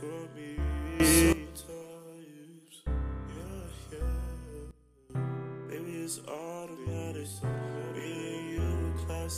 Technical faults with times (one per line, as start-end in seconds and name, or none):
1.00-1.33 sudden gain jump
4.71-5.10 sudden gain jump